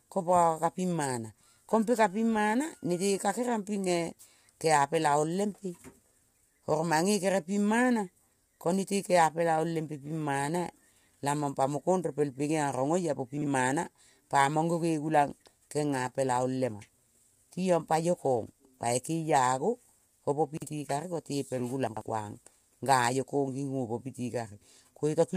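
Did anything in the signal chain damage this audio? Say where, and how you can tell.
Yes. At the codec stage, the speech is rough and grainy throughout, with noise filling the gaps between pitch harmonics and a thin, synthetic top band. This is likely low-delay AAC compression (AAC-ELD) at a low bitrate, around 32 kbps, whose short frames cannot resolve the harmonics cleanly.

At the buffer or storage stage, chunks are out of order, each about 46 ms long and written back late. 13.38 to 13.47 s, just after "oia po", and 20.57 to 20.67 s each play one chunk late. At 21.87 to 22.01 s a chunk lands two places late. Each spot sounds like a brief jumbled stutter.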